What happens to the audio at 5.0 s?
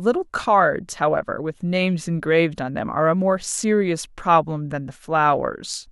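At 5.0 s the speech carries on intact, with no dropout, click, distortion or other audible fault at that point.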